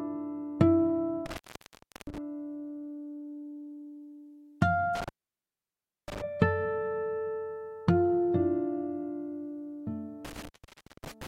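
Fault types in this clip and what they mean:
Intermittent contact: a loose plug or lead briefly breaking the connection. The audio drops out three times, crackling at each edge with faint hiss in the gaps, for about 0.70 s near 1.26 s, 0.99 s near 4.95 s, and 0.55 s from 10.25 s.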